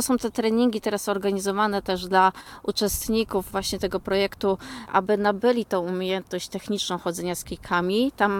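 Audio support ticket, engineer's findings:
One channel drops out, likely a stereo link fault, 2.41–2.46 s: for 50 ms the mono sum loses about 6 dB, a brief abrupt level dip.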